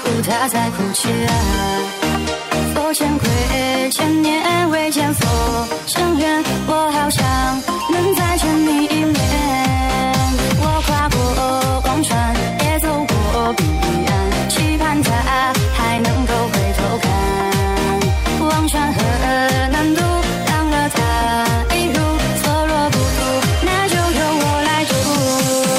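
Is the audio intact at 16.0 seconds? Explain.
No, there is a gap at a join of encoded pieces at 15.98 s. Two separately encoded sections were butted together untrimmed, so the encoder's start-up delay and end padding remain. That leaves a 7 ms silence with smeared edges before the sound resumes where it left off.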